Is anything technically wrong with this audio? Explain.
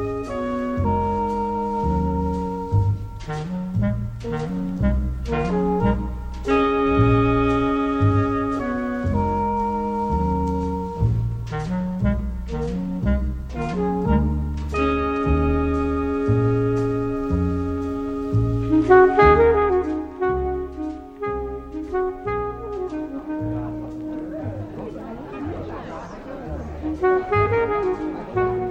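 No, there's nothing technically wrong with this audio.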